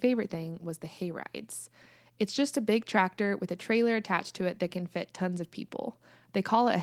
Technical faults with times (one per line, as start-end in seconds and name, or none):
none